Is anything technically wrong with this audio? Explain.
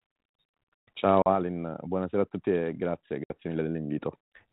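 Yes, there's packet loss on an ADPCM call. At 1.22 to 1.28 s about 40 ms drops out (a couple of packets), and at 3.24 to 3.31 s about 60 ms goes, right after "a tutti e grazie". Each gap is a hard-edged silence. The decoder's adaptive predictor and step size then drift from the sender's, so the speech comes back slightly distorted before settling. The underlying G.726 coding sounds like it's running at 32 kbit/s.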